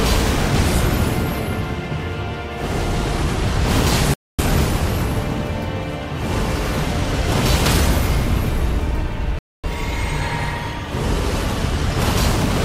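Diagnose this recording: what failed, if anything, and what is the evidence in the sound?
Looks like a gap between chunks at the playback or storage stage: hard-edged 250 ms silences at 4.14 s and 9.39 s, 5.25 s apart.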